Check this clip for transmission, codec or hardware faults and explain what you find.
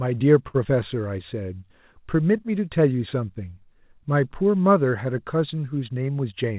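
Three transmission faults show up in this speech, all from the network side of a call. The audio stops at 4 kHz, a narrowband limit that fits G.711 mu-law at 64 kbps.

From 0.48 to 0.56 s there is a short stall from a late packet. The jitter buffer ran dry, so the receiver stretched the last sound for about 60 ms until the late packet arrived, then resumed where it had stopped. Nothing is lost. The sound is only held too long, with a faint buzz or dip. That distinguishes it from true loss, where audio goes missing.

From 0.64 to 0.67 s comes a short concealed packet loss. This time 20 ms of audio never reached the decoder, and the receiver covered the gap by extending the preceding sound, from its pitch if voiced or as shaped noise if not, for only about 7 ms before blending back. The result is a brief smear or wobble, and part of a sound can drop out. Unlike the stall just before it, material is actually missing rather than held.

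From 5.95 to 6.51 s there is a jitter buffer speed-up. The buffer held more audio than its target, so the receiver trimmed short pitch-period slices repeatedly, removing roughly 70 ms in total. Over that half second the speech runs at 112% speed and sounds hurried. The pitch stays unchanged, which separates this from simply playing the audio faster.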